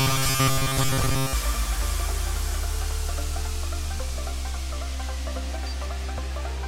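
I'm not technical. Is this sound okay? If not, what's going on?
No. From the very start until about 1.33 s, the audio has robotic sound from repeated short buffers. It turns into a stiff, metallic buzz at about 134 Hz. The likely cause is new audio arriving too slowly. To fill the gaps, the playback repeats a tiny slice, about 7.5 ms long, over and over. Most of the real sound in that stretch is skipped. The repeating slice forces that fixed buzzing pitch.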